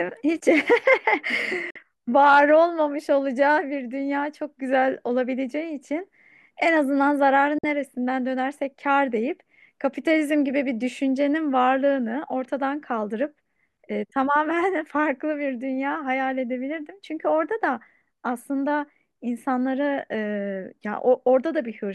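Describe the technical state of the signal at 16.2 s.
At 16.2 s the audio is intact, with no fault present in the signal at that moment.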